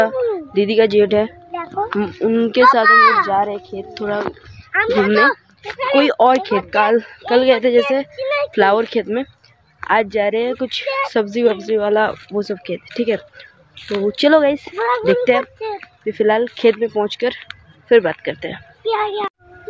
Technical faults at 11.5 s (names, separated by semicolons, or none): none